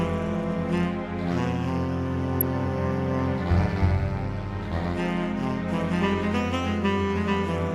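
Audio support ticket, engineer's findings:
DAB burbling at 2.41 s. Short burst of blips from weak DAB reception: bit errors, at a low rate around 0.15 percent, slipping past error correction into MP2 audio data. Corrupted samples put noise into individual sub-bands; any corrupted scale factors make sub-bands jump in level.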